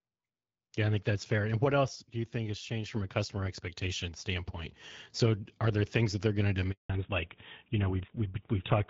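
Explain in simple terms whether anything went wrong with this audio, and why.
Yes, three things go wrong. At 1.95 s the speech and the background hiss drop together, abruptly rather than fading, and stay quieter until 2.93 s, just before "from a customer expectation". This is a sudden gain jump, likely a volume setting applied instantly without a smooth ramp. Because the hiss drops too, it is not the speaker moving away.

After "that they're going to", the sound dies at 6.72 s and stays silent for 180 ms. This is a handover gap: the phone switched networks mid-call and no speech got through in the meantime. Unlike a dropout from a poor signal, it is one clean silence, and what was said during it is lost.

When the sound returns at 6.90 s, it has fallen back to narrowband. The HD Voice link, clear until then, is replaced by an older phone codec, and everything above 4 kHz disappears to the end. 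The voice sounds duller and muffled, not quieter, which is what separates it from the level drop earlier.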